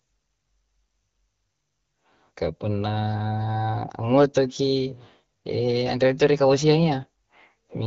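Speech over what sounds like a wideband AMR (HD Voice) path at a mid-range rate, with no technical faults to report.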